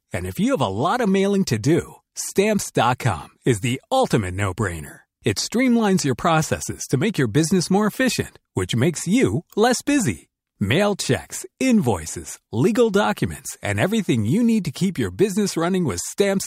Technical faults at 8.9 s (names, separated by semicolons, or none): none